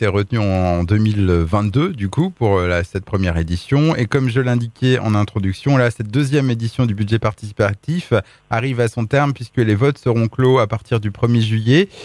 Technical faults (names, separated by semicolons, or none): resampler restarted on every block